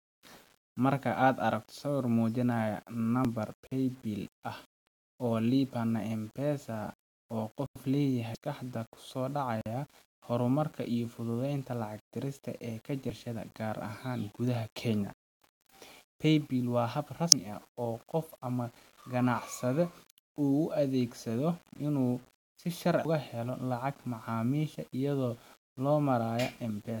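Gritty, grainy distortion runs through the whole of this speech recording, with noise roughly 30 dB below the voice that rises and falls with it. The likely cause is low bit depth without dither, consistent with rounding to 8 bits. Brief glitches at 3.25 s and 17.32 s point to damaged data in a compressed stream, where the decoder misreads corrupted frames and skips ahead to resynchronise. Abrupt holes appear at 3.67 s (46 ms), 7.66 s (93 ms) and 9.61 s (46 ms). These are blocks of digital silence, most likely where the output buffer went unfilled, and their lengths fit 2048- and 4096-sample buffers.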